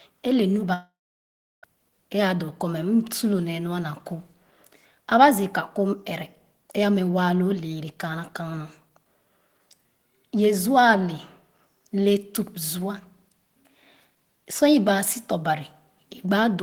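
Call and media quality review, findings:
Long network dropout, 0.73–1.65 s, right after "e le nu". Speech stops; the last sound is stretched into a fading buzz, then about 0.71 s of silence. Likely packet loss on the receive path: the jitter buffer's concealment extrapolated briefly, then muted. About 0.9 s of speech never played; playback resumes past the gap, not delayed.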